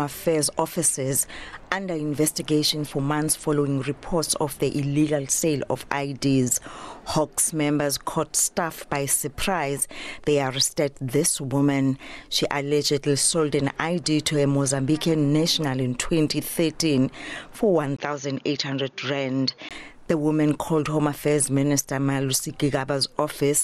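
At 17.97 s the sound drops out for 20 ms, then returns duller, somewhat quieter and with a faint new hiss, nothing above 6.8 kHz, until 19.71 s. This is likely an input switched to a poorer device, a narrower-band microphone.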